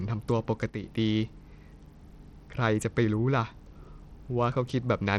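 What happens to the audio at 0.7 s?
At 0.70 s the speech suddenly drops in level by about 6 dB and stays down until 0.83 s, then snaps back. This is most likely one channel dropping out. For about 0.14 s only one side of the stereo signal is present. Once the two sides are summed to mono, sound shared by both channels loses half its contribution, which gives the abrupt 6 dB dip. Anything carried only by the missing side vanishes for that span.

Through that moment, and across the whole clip, the speech also carries plainly audible coding damage. It likely comes from Bluetooth SBC compression at a low bitrate, consistent with about 80 kbps. SBC splits the signal into a few wide frequency bands and hands out bits without modelling what the ear notices. With so few bits, the upper bands are starved or left empty. The treble thins out or flickers. The coarse quantisation in the remaining bands adds a gritty, rough texture and aliasing.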